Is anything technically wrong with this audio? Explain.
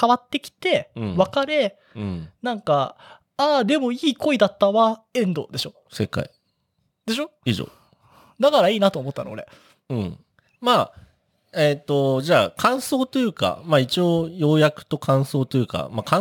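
Yes. From 5.42 s to the end, the speech shows crude rate conversion: samples were repeated by nearest-neighbour picking, which fits a 44.1 kHz to 48 kHz change. The resulting error, roughly 30 dB below the speech, is an inharmonic fizz tracking loud, bright syllables, steady rather than the warbling, time-smeared artefacts of lossy coding.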